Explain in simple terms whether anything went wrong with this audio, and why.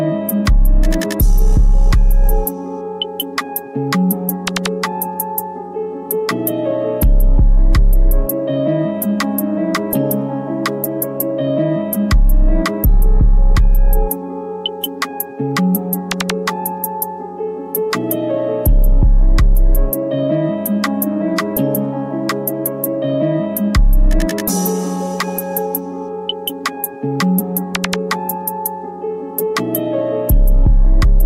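At 7.03 s there is a tiny tick, as if the sound blinked out for an instant. This is a block of digital silence: about 4 ms of the audio was replaced by zeros, so the sound drops abruptly to nothing and snaps back.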